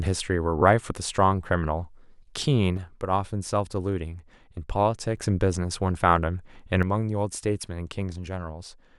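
At 2.77 s the speech level drops abruptly by about 6 dB and stays down until 5.17 s. It falls again at 6.83 s and remains low to the end. The likely cause is that one channel drops out of a stereo pair before the mono sum, halving everything both channels shared. On a waveform the envelope shrinks to half its height with sheer edges. A spectrogram darkens evenly across all frequencies.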